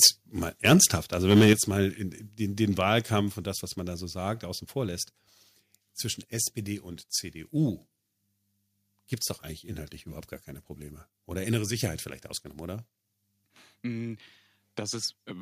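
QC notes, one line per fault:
0.02–0.09 s, 0.65–0.85 s, 1.30–1.53 s: microphone overload. The loudest syllables carry a harsh, crackling edge, most severe in the first burst, where peaks reach about 9 dB past the converter's limit and around a tenth of the samples are flattened. The later two reach about 5 dB over, the last ending just before "mal in den den". This is likely input gain set too high, so the converter squares off the waveform tops. Unlike a gain step, the grit sits only on peaks and the overall level doesn't change.
0.05 s, 1.53 s, 3.21 s: microphone volume stepped down. The whole signal, background included, drops in one clean step: about 3 dB at 0.05 s, about 7 dB at 1.53 s right before "mal in den den", and about 3 dB at 3.21 s between "mal in den den" and "und das was man". The first two follow distorted peaks, likely the call software cutting device input gain after detecting clipping. 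Unlike overload, the change is a lasting level shift without added distortion.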